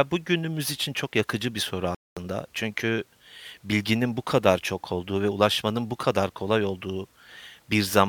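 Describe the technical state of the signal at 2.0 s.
At 2.0 s the signal is inside a playback stall running from 1.95 to 2.17 s, just after "çok yakıcı bir soru". The speech halts mid-flow and the output sits silent for about 220 ms before sound returns. The likely cause is the player running out of data or its thread being blocked. What sets it apart from a brief dropout or click is its length: a full fifth of a second of silence, not a momentary tick.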